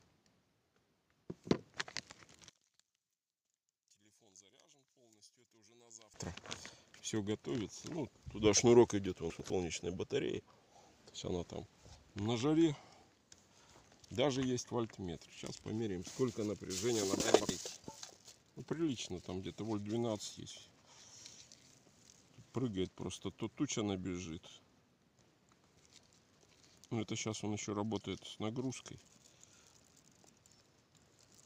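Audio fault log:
2.49–6.14 s, one channel inverted: the sound falls by about 28 dB to a faint copy, likely because one channel's reversed polarity cancels shared content when summed to mono.
9.3–9.5 s and 17.2–17.5 s, chunks out of order: brief jumbled stretches, as a 100 ms chunk plays one, then two, chunks late, leaving hard joins.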